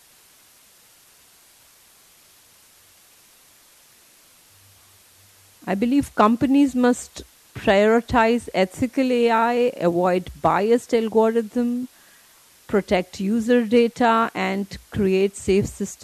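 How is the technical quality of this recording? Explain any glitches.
The recording has one persistent technical fault: a steady hiss runs under the speech for the whole clip.

Low bit depth with dither runs from start to finish. The signal is stored with very few amplitude steps, consistent with 8-bit resolution, and random dither is added before rounding, so the quantisation error becomes broadband white noise rather than harmonic distortion. It sits roughly 30 dB below the speech as a constant, even hiss, with no grittiness or crackle on the voice itself.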